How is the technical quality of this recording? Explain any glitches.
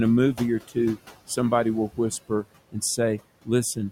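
The recording has one technical fault, present throughout: noise suppressor artifacts. The room noise sits about 18 dB below the speech.

Noise suppressor artifacts, for the whole clip: background noise dips between words and swells back under speech, because a suppressor cuts bands it judges steady noise by about 17 dB, frame by frame.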